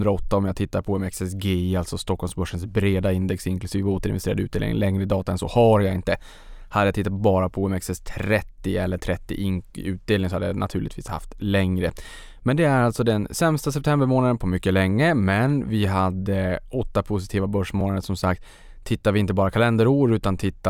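At 9.24 s and again at 17.81 s, new audio failed to reach the playback device in time, so it replayed its last buffer: a repeated buffer. The repeated piece is about 1.33 ms long, which fits a 64-sample buffer. It sounds four extra times at 9.24 s and twice at 17.81 s, each with a hard join, and essentially no speech is lost. With a buffer this short, each event is heard as a click or brief buzz rather than a stutter.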